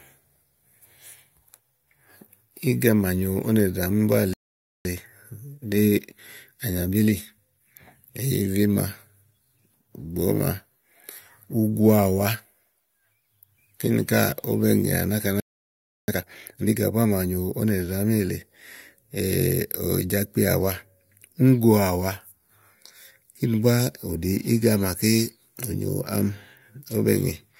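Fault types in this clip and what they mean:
Playback stall: The speech cuts out mid-flow and goes silent for about half a second at 4.34 s and about 0.68 s at 15.40 s, then resumes. The likely cause is the player running dry of data or its thread getting blocked.
Time-compressed catch-up: Right after each gap the player trims its backlog by snipping and cross-fading small chunks, so the speech sounds hurried at normal pitch: 1.1x from 4.85 to 7.85 s, and a sharper 2x burst from 16.08 to 16.74 s.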